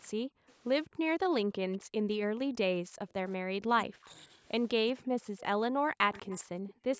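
From 0.09 to 0.61 s, again from 0.87 to 4.31 s, and from 4.75 s to the end, the speech sinks in level, by about 40 dB at its deepest. In total roughly 0.4 s, 3 s and 2 s are affected. This is speech suppressed in double talk, likely caused by an echo canceller that could not tell the near talker from the far side's loudspeaker echo and turned both down. On a waveform the envelope collapses into gaps.

Echo leak appears as a faint copy of the voice arriving 192 ms late. It is heard in short scraps at 0.48–0.53 s and 4.10–4.15 s, at about 35 dB below the speech, and in a longer stretch from 6.13 to 6.44 s, at about 25 dB below. The likely cause is a far-end echo canceller that left residue of its loudspeaker pickup. A spectrogram shows it as weak copies of earlier harmonic patterns.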